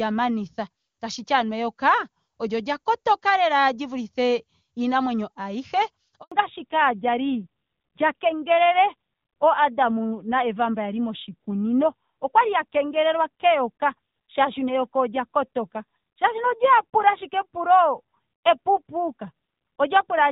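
At 6.22 s the speech cuts out for 100 ms. This is a handover gap: the call switched networks and no frames arrived meanwhile. From 6.32 s to the end, a fallback to narrowband strips everything above 4 kHz. The clear HD Voice sound turns dull and rougher, which fits a drop to a low-rate narrowband codec around 7.4 kbit/s.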